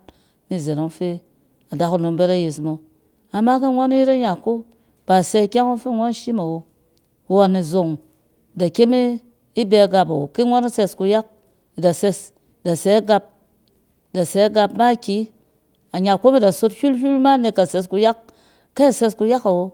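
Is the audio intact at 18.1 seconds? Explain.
Yes, the audio is intact at 18.1 seconds, with no dropout, glitch or other fault at that moment.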